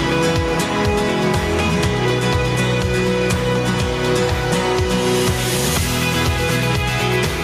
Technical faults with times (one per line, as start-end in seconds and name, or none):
0.00-7.43 gain pumping